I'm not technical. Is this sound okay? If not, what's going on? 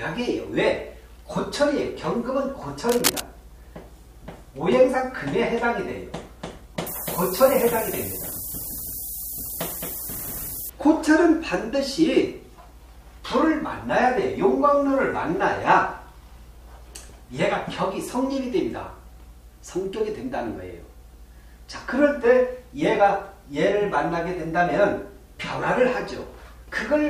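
No. From 2.89 to 3.21 s there is a burst of cable scratch noise, a rough, uneven scratching about as loud as the sound itself. The likely cause is a worn cable or connector being moved. Unlike a steady hiss, it is crackly and brief.

From 6.87 to 10.70 s the audio drops to low bit depth with noise shaping. It is stored with only about six bits, which leaves a constant, thin, very bright hiss nearly as loud as the sound. Unlike the scratching, it is smooth and even.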